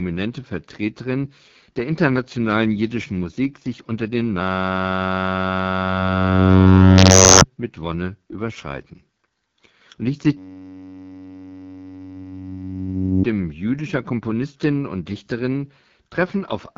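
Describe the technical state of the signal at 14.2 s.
At 14.2 s the speech carries AMR wideband (HD Voice) codec damage, present throughout the clip. The pulse-excited vocal tract model, at a rate that fits 8.85 kbit/s, leaves the speech plainly rough and raspy, with a noise-filled upper band and nothing above 7.8 kHz.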